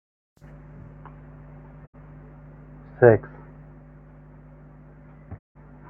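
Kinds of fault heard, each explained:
Digital broadcast dropout: the receiver stopped getting decodable frames and muted the speech until valid data resumed, so whatever was sent during each gap is lost. It happens twice, from 1.85 to 1.96 s and from 5.37 to 5.57 s, each with a 20 ms fade. The 64 ms and 160 ms losses fit two and five frames. On a waveform the envelope ramps quickly to a flat line, and a spectrogram shows blank columns across all frequencies.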